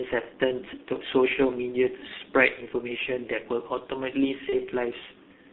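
The speech runs through a G.723.1 codec at what sounds like about 6.3 kbit/s, passing only 200 Hz to 3.6 kHz, so it comes out heavily muffled and hoarse with smeared consonants. From 4.49 to 4.55 s, VoIP packet loss concealed by the speech codec fills a gap that fits one lost 30 ms frame, leaving a brief stretched, fading smear.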